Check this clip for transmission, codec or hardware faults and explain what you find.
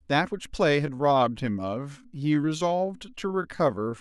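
One fault is present: a time-stretched section from 0.80 s to the end at 4.00 s. From there the speech slows to 0.71 times its pace while pitch stays put, likely because software lengthened the audio by repeating short pieces. It drags. On a spectrogram the harmonics hold their height while syllables widen. The waveform shows repeated grain-like segments.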